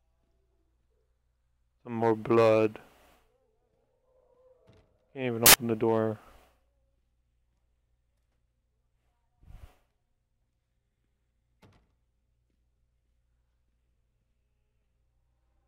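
Samples built from the wrong bytes appear from 5.46 to 5.54 s, a burst of about 80 ms. For that stretch the bytes making up each sample are assembled incorrectly, whether shifted by one byte, swapped in order or read at the wrong alignment. The rapidly varying low-order bits end up as the most significant part of every value, so the underlying sound is replaced by a loud, harsh blast of broadband noise until correct decoding resumes.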